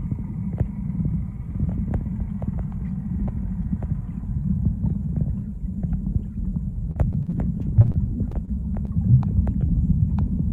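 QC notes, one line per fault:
6.91–7.34 s, repeated packet loss (robotic sound): five gaps, longest 36 ms, a quarter of the span patched by repeating sound, so it turns choppy.
7.82–7.86, 7.86–7.90, 7.92–7.96, 8.45–8.49 and 8.85–8.90 s, short concealed packet loss: 20 ms holes bridged and blended back, heard as brief smears or wobbles, not sustained robotic chop.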